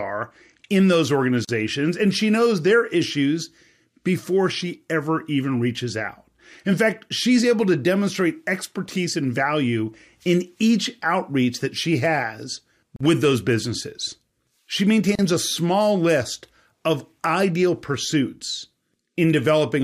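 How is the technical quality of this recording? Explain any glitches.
The recording has three short dropouts, each a gap at a join of encoded pieces. The speech was encoded in separate sections and joined without trimming the encoder's start-up delay and last-frame padding, so that silence stays in. The speech cuts out for about 42 ms at 1.45 to 1.49 s, about 42 ms at 12.96 to 13.01 s, and about 35 ms at 15.15 to 15.19 s, edges smeared by the codec, before resuming exactly where it stopped.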